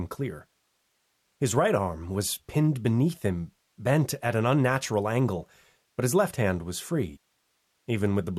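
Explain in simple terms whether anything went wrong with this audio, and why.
A stream segment was likely skipped at 7.15 s: one chunk of the stream failed to load, so the speech suddenly jumps ahead with a brief blip.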